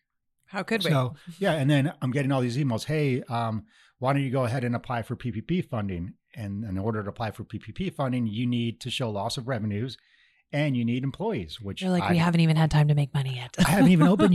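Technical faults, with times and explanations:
4.56 s, damaged data in a compressed stream: a very brief glitch of roughly 14 ms cuts into the speech. Corrupted bytes at this point made the decoder misread or refuse a frame and lose sync until it found the next valid frame header.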